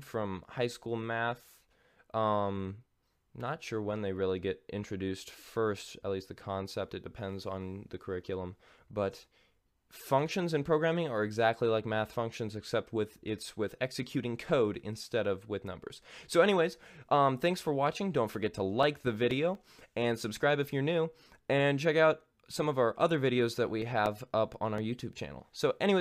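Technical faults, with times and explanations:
17.87–19.55 s, CD scratch ticks: a blemish on the disc defeats error correction once per revolution, leaving eight brief ticks, about five a second, each only a few milliseconds long.
23.58–25.02 s, CD scratch ticks: a blemish again defeats error correction once per revolution, with seven interpolated or muted gaps ticking at about five a second, the longest around 5 ms.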